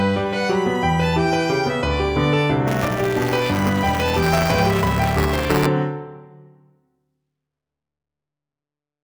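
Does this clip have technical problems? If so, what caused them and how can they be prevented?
Yes. Buffer tearing runs from 2.67 to 5.66 s, a 200 Hz robotic buzz caused by writer and playback pointers crossing, so a small slice of each buffer replays audio from about 10 ms earlier. Spectrograms show vertical lines every 5 ms, waveforms matching jumps. Keeping pointers synchronised with adequate buffer headroom prevents it.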